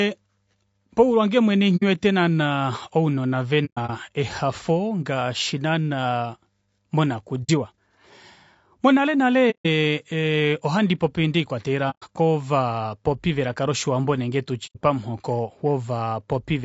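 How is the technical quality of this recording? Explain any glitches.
The recording is clearly degraded, with coarse coding throughout and six short dropouts.

Throughout, the speech sounds rough and grainy, with noise filling the gaps between harmonics and a thin, artificial top end. This is likely low-delay AAC compression (AAC-ELD) at a low bitrate, around 32 kbps. Its short frames resolve pitch harmonics poorly.

AAC frame loss with muting appears at these points:
1.77–1.83 s, between "paulwange mwene" and "naana ounona"
3.65–3.90 s, scattered holes totalling 150 ms, the longest about 100 ms, before "ehafo ngaashi naana"
7.43–7.50 s
9.50–9.66 s
11.90–12.04 s, just before "kovapopi velaka loshiwambo nenge"
14.66–14.77 s

Each time, the lost frames were decoded as silence. The overlapping windows fade the sound out and back in, so these are soft-edged holes, unlike hard cuts or packet-loss concealment that repeats sound.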